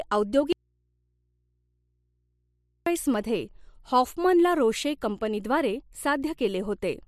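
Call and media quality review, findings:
Audio dropout to a faint residue, 0.53–2.86 s (about 2.3 s): speech cuts abruptly to low mains hum roughly 50 dB below the signal, returning at "मध्ये हॉफमन ला रोशे". Likely an upstream source or connection interruption with the downstream input left open and live. Hard edges and hum rule out a pause or fade.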